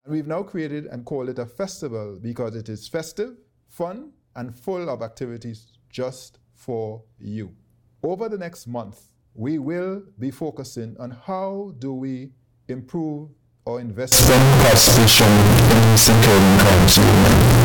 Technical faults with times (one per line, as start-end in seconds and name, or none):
14.12-17.64 float read as integer